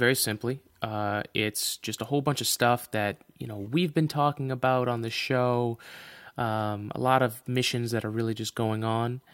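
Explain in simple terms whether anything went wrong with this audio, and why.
Nothing went wrong here.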